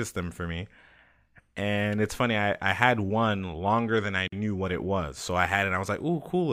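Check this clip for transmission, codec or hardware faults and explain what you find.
One transmission fault is present. A gap at a join of encoded pieces runs from 4.28 to 4.32 s, between "one longer than I" and "knew what it was". Separately encoded pieces, apparently 6 s long, were joined untrimmed, and the encoder's leading delay and end padding left a 48 ms gap with smeared edges before the speech resumes.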